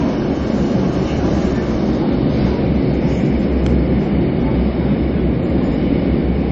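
From start to finish, the audio has likely been squeezed through a low-rate MP3 encoder, one that runs out of bits and discards what its hearing model judges least important. Nothing survives above 8.3 kHz, so the everyday sounds lose their top end and turn dull, and the compression damage is plainly audible as watery, swirling texture where weak frequency lines flicker on and off. The narrowness fits a bitrate around 32 kbps.

Between 3.66 and 3.69 s a loud pop cuts in, most likely a brief electrical pulse from a switch, connector, static discharge or driver glitch added on top of the signal. It is heard as a single sharp click standing out about 5 dB above the surrounding sound, which carries on underneath without a break.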